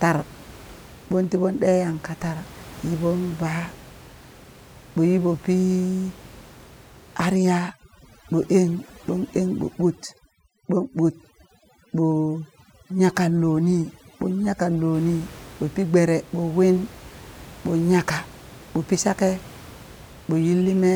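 From 7.36 to 14.94 s you get overdone noise removal: the denoiser's clamping bands near its noise estimate hard, so the room noise, about 22 dB under the speech elsewhere, drops and breaks up into twinkling specks.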